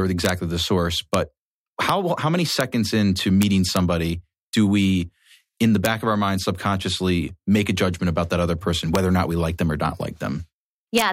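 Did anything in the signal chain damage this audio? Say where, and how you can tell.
Yes: violent cracks on loud peaks at 0.25–0.29 s (before "the source but"), 1.14 s (after "the source"), 1.89, 2.61, 3.42–3.77, 5.85, 8.95 (after "about that other person") and 10.98–11.02 s. This is integer overflow in a gain or format-conversion stage: peaks only about 1 dB over full scale wrap to the opposite sign instead of clipping.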